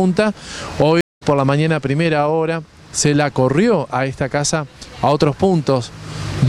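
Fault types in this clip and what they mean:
Stream reconnect: from 1.01 to 1.23 s the audio drops to 175 ms of silence, then a freshly started decoder resumes roughly 150 ms further on with a fade-in, so material is skipped, unlike a plain dropout that resumes where it stopped.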